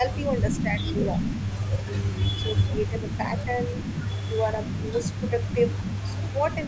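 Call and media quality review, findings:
Speech suppressed in double talk: level dips of about 5 to 15 dB at 0–0.04, 0.62–1.0, 2.38–3.73, 4.28–4.41, 4.72–5.6, 6.09–6.56 s. Likely the echo canceller ducking both sides.

Echo leak: faint copy trailing 180 ms behind, about 25 dB down, from 0.11 s to the end. Likely far-end loudspeaker echo getting past cancellation.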